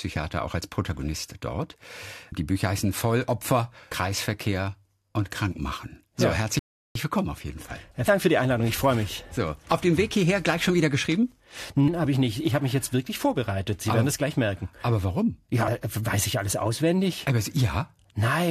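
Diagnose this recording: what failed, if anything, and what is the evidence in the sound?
A rebuffering stall at the playback stage breaks the speech at 6.59 s: it drops to silence until 6.96 s, then resumes exactly where it stopped, adding about 0.36 s. The waveform shows a flat gap, and the spectrogram shows a blank vertical band with continuous content on either side.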